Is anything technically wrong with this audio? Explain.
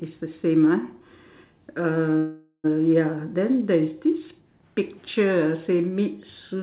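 Yes, there's a call audio freeze from 2.18 to 2.66 s, likely from packets stalling so the jitter buffer ran dry. The receiver stretched the last sound into a fading buzz for about 460 ms, with a brief silence at the end, then picked up where it stopped, so nothing's lost, just delayed. The G.711-style narrowband sound, with nothing above 4 kHz, is the call path itself.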